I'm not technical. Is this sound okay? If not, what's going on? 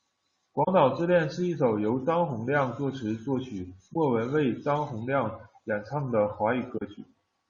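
No. The speech sounds rough and grainy throughout, with a thin, artificial top end. That is likely low-delay AAC compression, the kind used for video calls.

There are also three brief dropouts, from 0.63 to 0.68 s, 3.93 to 3.96 s, and 6.77 to 6.82 s. Each is AAC frame loss with muting: small chunks went missing and were replaced by silence, with the sound fading out and back in.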